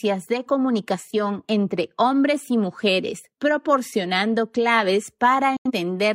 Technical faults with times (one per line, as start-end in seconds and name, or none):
5.57-5.71 digital broadcast dropout